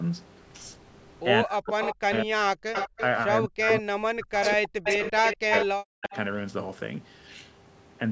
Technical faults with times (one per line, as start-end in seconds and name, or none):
1.45-2.44 speech suppressed in double talk
1.81-2.20 echo leak
2.73-3.06 echo leak
3.44-6.13 speech suppressed in double talk
3.70-3.82 echo leak
4.43-5.66 echo leak